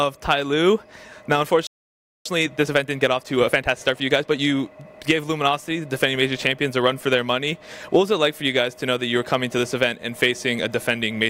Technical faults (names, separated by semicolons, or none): playback stall; time-compressed catch-up